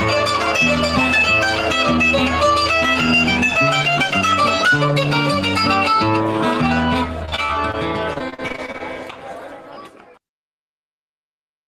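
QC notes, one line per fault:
7.25–7.75 s, repeated packet loss (robotic sound): a rapid string of short holes, none longer than 31 ms, each patched by stretching the preceding sound, so about a quarter of the half-second turns choppy. Unlike a single dropout, the gaps keep recurring.
8.13–8.82 s, repeated packet loss (robotic sound): a denser burst, with holes up to 42 ms filled by extending the prior sound over about a third of the stretch, giving a choppy texture rather than one clean click or mute.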